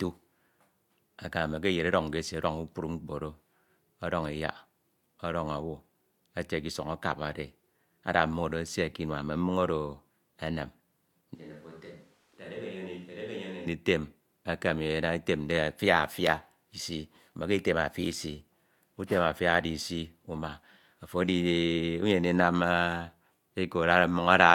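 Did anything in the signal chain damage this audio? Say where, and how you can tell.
Yes. From 11.35 to 13.66 s the speech abruptly turns roomy and hollow, loses bass and drops about 10 dB, with room noise near 30 dB below it. That is likely a switch to a distant microphone at capture. A spectrogram shows thinned lows and a raised noise floor, and the waveform steps down sharply at the start and back up at the end.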